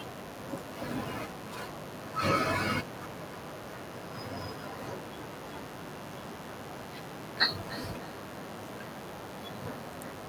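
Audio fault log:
Throughout: mains buzz. There's a steady, raspy 50 Hz buzz under everything, sitting roughly 15 dB below the speech. Sharp switching spikes twice per mains cycle, probably from a dimmer, rectifier or unshielded lead, pile up a long ladder of harmonics, which gives it that edge.
3.65 to 9.02 s: feedback echo between two devices. The speech comes back about every third of a second, peaking around 15 dB under the original, thinner and a bit ringy. One device is replaying what another's mic sent, and that mic picks it up again, so neither echo canceller catches it.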